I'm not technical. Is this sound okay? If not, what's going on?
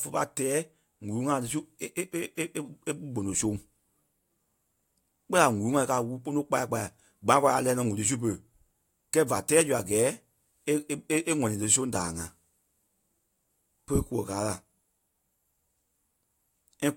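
No. From 4.24 to 5.27 seconds there is buffer tearing. Speech passes through a small holding area, and the part playing it back has fallen out of step with the part filling it. So each chunk carries a small slice of sound from a moment earlier, joined in roughly. That repeats 25 times a second, which points to chunks of about 40 milliseconds. You hear it as a robotic buzz over the speech.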